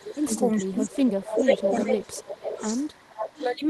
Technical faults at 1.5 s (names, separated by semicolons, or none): echo leak; speech suppressed in double talk